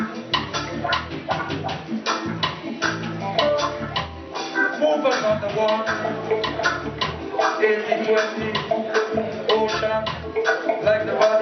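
No technical faults occur anywhere in the audio, so there is nothing to describe in time order.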